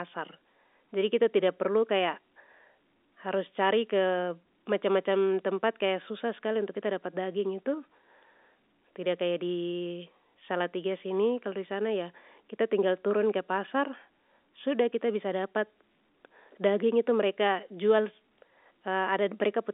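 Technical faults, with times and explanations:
No technical faults can be heard in this speech, so there are no times or explanations to give.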